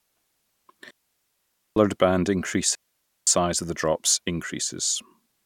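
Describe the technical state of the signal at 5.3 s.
At 5.3 s the speech signal is intact, with no audible technical fault at that moment.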